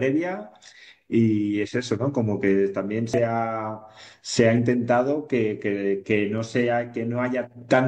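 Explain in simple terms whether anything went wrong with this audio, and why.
At 3.14 to 3.16 s a brief blip interrupts the speech: damaged data in a compressed stream. The decoder misread corrupted bytes and resynchronised on the next frame.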